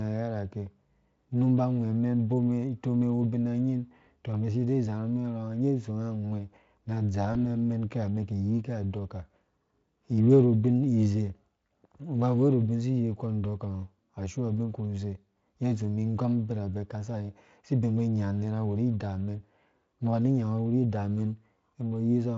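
At 7.33 to 7.36 s the speech briefly turns into a short buzzy or noise-like smear. This is VoIP packet loss concealed by the speech codec. About 20 ms of audio went missing, which fits a single lost frame. The Speex decoder filled the gap by repeating its last pitch and filter shape at falling gain, and the voice stays weak or distorted for tens of milliseconds or more afterwards. On a spectrogram the harmonics run flat and fade rather than following the speech. On the waveform, near-identical cycles shrink in amplitude. The surrounding Speex audio shows at most faint coding texture.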